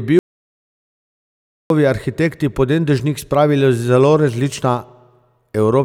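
At 0.19 s the speech cuts off abruptly into total silence, with no room tone or hiss, and resumes just as suddenly at 1.70 s on "arhitekti pod en dežnik". This is an audio dropout to silence lasting about 1.51 s. Whatever was spoken in that stretch is missing. The likely cause is a momentary loss of input, such as a disconnected device, a failed link or an accidental mute, while recording carried on writing silence.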